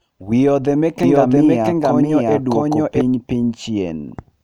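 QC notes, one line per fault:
1.03–3.01 s, doubled audio track: a full-band copy of the speech runs roughly 0.7 s behind at about equal level, with no decay or room colour, likely from a second capture path or misaligned edit. The spectrogram shows each pattern repeated, starting and stopping abruptly.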